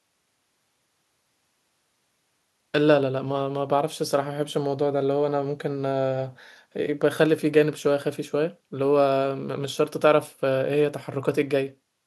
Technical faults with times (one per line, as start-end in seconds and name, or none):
none